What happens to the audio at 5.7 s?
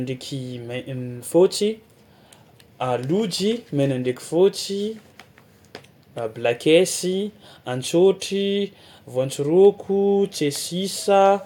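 Nothing goes wrong at 5.7 s: the speech carries on intact through that moment.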